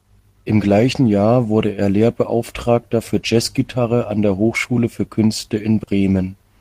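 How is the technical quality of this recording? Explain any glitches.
There's one glitch, near the end: a short concealed packet loss around 5.83 to 5.90 s. About 40 ms of audio never arrived, so the receiver stretched the preceding sound to cover it, leaving a brief smeared wobble.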